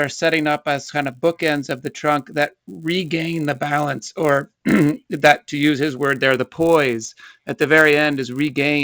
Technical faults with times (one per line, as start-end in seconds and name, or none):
0.00-8.84 resampler restarted on every block